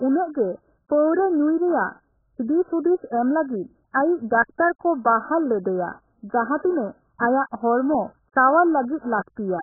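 AAC compression, the likely cause, spans the whole speech: nothing remains above 1.8 kHz, and heavy coding damage sounds dull and smeared, fitting about 8 kbps.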